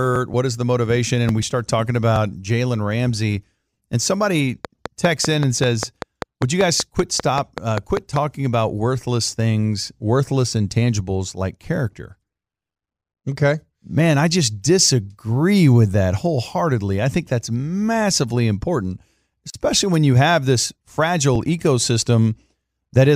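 From 4.65 to 8.17 s, a train of clicks ticks steadily at about 5 per second, roughly twenty, standing well above the speech, likely from interference.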